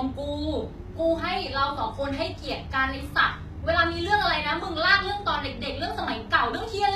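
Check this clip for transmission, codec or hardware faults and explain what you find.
One codec fault runs through the whole clip: HE-AAC compression, plainly audible from start to finish. The treble here was most likely rebuilt by spectral band replication: the codec keeps only the lower spectrum and copies it upward under a coarse envelope, which fits a low bitrate near 20 kbps. So the speech stays bright up to a hard ceiling at 14.9 kHz, but s sounds come out gritty, metallic or lispy because the synthetic harmonics don't line up with the real ones below. A plain low-pass or ordinary low-bitrate coder would sound dull instead, with the top simply missing rather than present but false.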